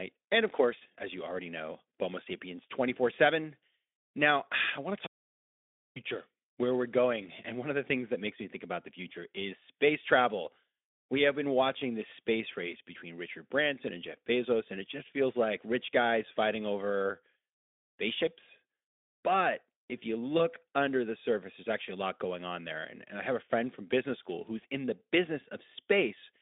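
Audio dropout to silence runs from 5.07 to 5.96 s, right after "I want to". For about 0.89 s the speech stops mid-phrase and the gap is plain silence, with no room tone or line hiss underneath. That points to a recorder that kept writing silence while its input was gone, likely through a brief disconnect or a stray mute. Whatever was said in those 0.89 s is lost and does not come back.

VoIP packet loss concealed by the speech codec occurs from 20.37 to 20.41 s, between "if you" and "under the surface there's". About 20 ms of audio, consistent with a single missing frame, was rebuilt by the Speex decoder from its last pitch and filter state. It sounds like a short, buzzy smear rather than a gap. Because each following frame builds on that guess, the voice stays weak for a moment as "under" begins. The line itself is narrowband, roughly 250 Hz to 3.6 kHz, with the light coding roughness of a setting near 15 kbps.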